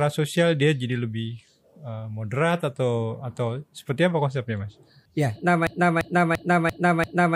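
A speech recording that falls into a broken-record loop at 5.67 s. From there to the end, one fragment about 0.34 s long plays back to back, five times over, each repeat identical. The speech that should have continued is gone, replaced by the stuck fragment. The likely cause is a stalled player, encoder or stream that kept resending the last piece of audio it held.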